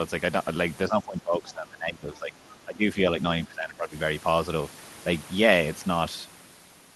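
From 0.89 to 2.35 s, speech suppressed in double talk: the echo canceller, likely unable to tell the talker from loudspeaker echo while both sides spoke, pulled the speech down, by around 15 dB at its deepest, so it sinks for about a second and a half. Twice, at 1.48 to 1.53 s and 2.49 to 2.54 s, the other side's voice is leaking through, likely residual echo the canceller failed to remove, heard as faint scraps far below the talker. The suppression returns at 2.65 to 2.97 s, with a dip of around 10 dB, and again at 3.45 to 3.93 s, where the speech drops by around 15 dB.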